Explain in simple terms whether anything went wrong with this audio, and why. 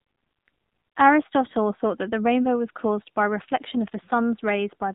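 The whole clip carries AMR narrowband mobile codec damage: a phone-call squeeze removing everything above 4 kHz, plus a buzzy, synthetic edge that simple muffling wouldn't add.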